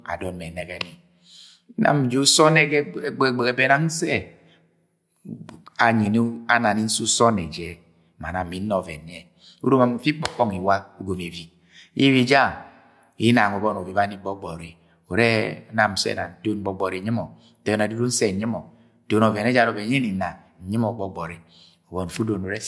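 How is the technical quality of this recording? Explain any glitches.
The recording has no technical glitches at any point; nothing in the signal indicates a fault in how it was captured, carried or reproduced.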